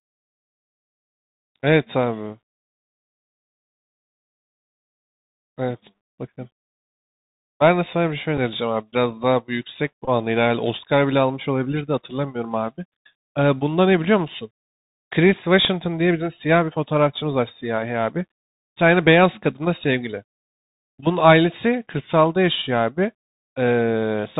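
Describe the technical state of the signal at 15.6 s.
At 15.64 s the speech carries a Bluetooth headset packet repeat. About 11.2 ms of audio never arrived, and the headset chip filled the gap by decoding the previous packet's bits again, which fits three consecutive 3.75 ms packets. Three identical segments in a row give a brief periodic structure near 267 Hz, heard as a short buzzy tick rather than a sustained drone before normal packets resume.

Underneath that event, the whole signal passes through the narrowband Bluetooth CVSD headset codec, consistent with a 64 kbit/s one-bit delta stream. Content above 4 kHz is missing, so the speech sounds band-limited and boxy. The damage is plainly audible: the adaptive step cannot keep up with loud high-frequency energy, leaving s sounds scratchy and distorted, and a granular hiss sits under the speech at this moment as it does throughout.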